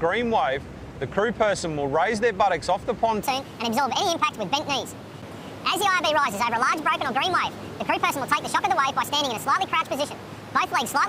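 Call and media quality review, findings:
Section at the wrong speed, 3.22 s to end: likely resampling clock mismatch plays audio 1.64x fast; pitch jumps about ten semitones, sounding high and hurried.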